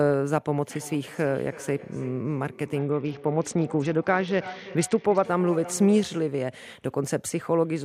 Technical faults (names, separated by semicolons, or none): feedback echo between two devices; Bluetooth SBC bit pool drop